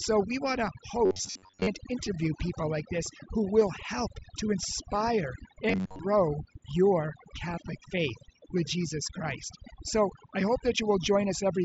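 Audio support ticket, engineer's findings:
Overdone noise removal throughout: background near-silent with twinkling specks. Quiet bands gated out frame by frame. On the spectrogram, a black floor between words with scattered isolated bins flickering on and off, and the upper harmonics of speech eaten away.

Robotic buzz at 1.06–1.67 s and 5.69–6.00 s, rigid metallic tone at about 93.8 Hz. Likely cause is audio arriving too seldom, with the last ~10.7 ms repeated to fill the gaps. Most of the real audio is skipped. Waveform shows an identical repeating cycle; spectrogram shows even horizontal stripes at multiples of 93.8 Hz.

Concealed Bluetooth headset packet loss at 3.61 s and 7.53 s, each a single 7.5 ms loss continued from recent waveform. Nearly inaudible. Waveform shows a short copied segment with a slight seam; spectrogram shows a thin vertical smear.

The mSBC link itself carries speech up to 8 kHz, with the expected hard ceiling visible on the spectrogram.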